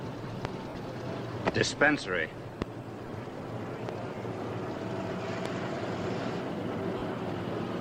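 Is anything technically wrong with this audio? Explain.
Yes, there are two kinds of fault. Loud pops at 0.45–0.47, 2.62–2.64, 3.89–3.91 and 5.46–5.48 s, peaking about 20 dB then about 15 dB above the sound, are likely voltage steps from a plug, switch or static. Each shows as a tall spike on the waveform and a thin vertical stripe on a spectrogram.

Lost LE Audio frames at 0.69–0.75 s (60 ms), 3.02–3.12 s (60 ms scattered, runs near 20 ms) and 6.98–7.02 s (40 ms) make the decoder repeat the last spectrum with random signs. Tones smear into noise, and the spectrogram shows blurred, fading patches.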